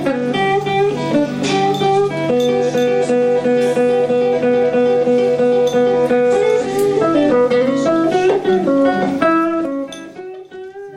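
From 9.24 to 10.34 s, a level drop of around 20 dB is applied in coarse steps, about fifty a second, with no smoothing between them. Each jump leaves a tiny click, so zipper noise rides on the sound as a fast ticking while it fades.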